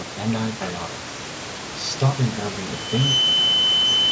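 Loudspeaker feedback squeal starts at 2.72 s and runs to the end of the clip. The microphone is picking up the loudspeaker it drives, and at 3 kHz the gain around that loop exceeds one, so the tone feeds on itself. Within about 0.4 s it swells from a single tone into a squeal that sits roughly 5 dB above the speech and rises over the room noise, which stays about 14 dB below the speech.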